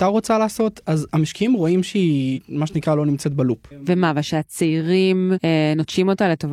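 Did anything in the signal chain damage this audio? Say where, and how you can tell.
Yes. The damage is at the codec stage: damaged data in a compressed stream. Corrupted bytes in the encoded speech made the decoder misread frames, lose sync and hunt for the next valid frame header before resuming. This is heard as two brief synthetic blips, from 2.33 to 2.39 s and from 5.34 to 5.39 s, where the decoded speech breaks up for a few tens of milliseconds.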